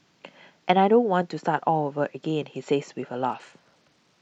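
A Bluetooth SBC bit pool drop hits this speech clip from 3.29 s to the end: the link appears to have congested, and the encoder cut its bit allocation. The sound suggests a fall from around bit pool 28 to 10, near 84 kbps. The top sub-bands lose their bits and the rest are quantised coarsely, so the treble dulls and a gritty noise rises over the final second.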